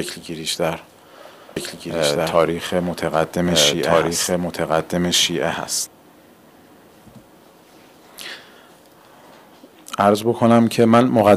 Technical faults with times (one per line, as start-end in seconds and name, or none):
1.56-5.87 doubled audio track